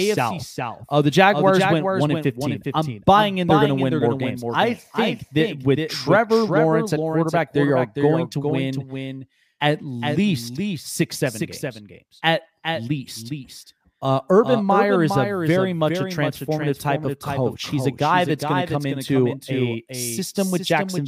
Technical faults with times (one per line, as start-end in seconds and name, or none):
0.00-21.07 doubled audio track